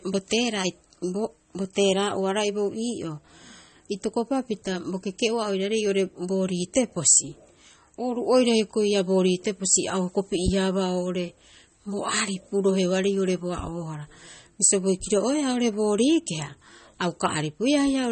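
The speech is marked by MP3 compression throughout, likely from a low-bitrate encode near 32 kbps. Nothing sounds above roughly 8.4 kHz, and the remaining detail swirls and warbles as weak frequency lines flicker between frames, which distinguishes it from a plain low-pass filter's clean, steady dullness.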